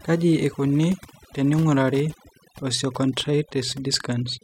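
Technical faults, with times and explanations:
Throughout, Wi-Fi interference: a nearby Wi-Fi radio's beacon transmissions are being picked up and rectified by the audio circuitry, so each beacon leaves a small audible pulse. Because the beacon repeats every 102.4 ms, the result is a steady, evenly spaced ticking at roughly ten per second, running under the speech from start to finish. It sits faint, well below the speech level.
Throughout, overdone noise removal: a noise reduction stage has been set far too aggressively, pulling individual frequency bands down or switching them off whenever they come close to its noise estimate. Quieter parts of the speech fall under that threshold and get stripped along with the background noise. The background collapses to near silence dotted with twinkling specks of leftover noise.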